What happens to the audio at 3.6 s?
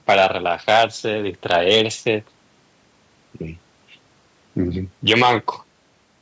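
Nothing goes wrong at 3.6 s: the speech there runs on intact, with only the normal bass trimming of call microphone processing and no content above 8 kHz.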